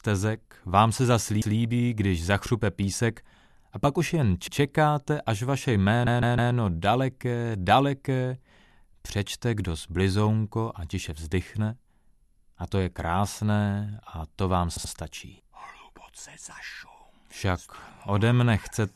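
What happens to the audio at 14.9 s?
Just after "to vám", from 14.76 to 14.92 s, there are repeated frames: a 78.4 ms block, consistent with three compressed frames, plays twice more. The decoder repeats that stretch, producing an audible stutter and lengthening the clip by 156.7 ms.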